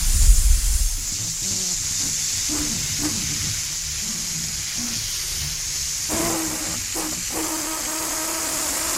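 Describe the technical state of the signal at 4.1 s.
At 4.1 s the everyday sound plays through cleanly, with no dropout, clipping, glitch or other fault audible at that moment.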